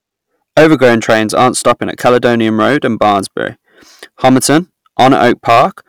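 Hard clipping throughout: overdriven about 10 dB, speech peaks are cut flat, giving harsh fuzz; waveform tops look squared, with vertical high-frequency smears on spectrogram.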